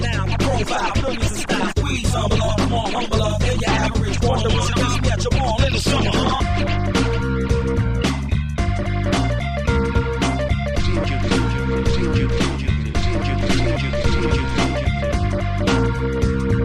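No technical faults can be heard anywhere in the recording, and the signal holds steady throughout.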